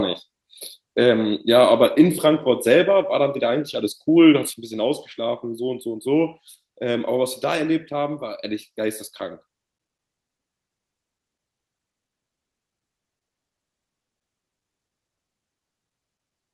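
A speech recording with a sudden level fault. At 4.54 s the sound drops abruptly by about 6 dB and stays down until the end. The likely cause is one channel dropping out, halving the shared signal when the two channels are summed to mono.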